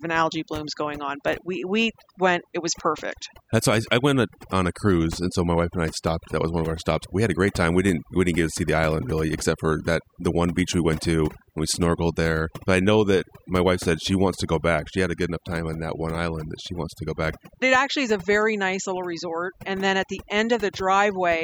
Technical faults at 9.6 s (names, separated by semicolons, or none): overdone noise removal